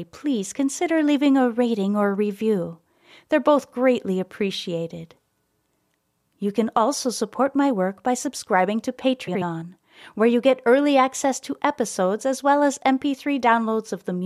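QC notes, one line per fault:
9.27–9.42 s, frames out of order: a brief garbled flutter in the speech. Two neighbouring blocks of 69.7 ms each played in swapped order, which fits runs of three codec frames, so no time is lost.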